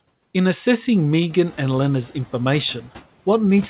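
At about 1.5 s the room noise steps up sharply, roughly 14 dB louder, and the noise suppressor is caught out. From 1.46 to 1.71 s the new noise leaks through with little reduction, then sinks over about 250 ms as the suppressor's estimate catches up, ending about 4 dB lower. Unlike pumping, which breathes with every pause, this is a single settling tied to the noise jump, heard through narrowband audio with nothing above 4 kHz.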